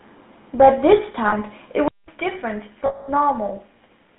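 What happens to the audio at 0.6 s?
GSM full-rate codec damage is present at 0.6 s, as it is across the whole clip. The codec models the vocal tract as a filter and excites it with a regular pulse train, keeping only a third of the excitation samples, which fits a 13 kbps rate. Nothing survives outside roughly 150 Hz to 3.7 kHz, so the speech sounds narrow and telephone-like, with a plainly audible buzzy, gravelly roughness.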